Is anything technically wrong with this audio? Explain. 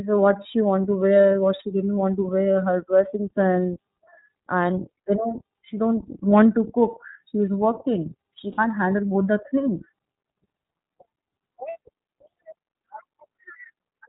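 Yes. The iLBC codec is plainly audible throughout. Nothing above 4 kHz survives, and the speech sounds rough and synthetic, which fits iLBC's 13.33 kbps mode with 30 ms frames rather than generic band-limiting.

There are lost iLBC frames at 8.52 s and 11.70 s, each about 60 ms. The decoder repeats the last pitch cycle mixed with noise, so each gap sounds like a buzzy held vowel rather than silence, and the voice recovers immediately.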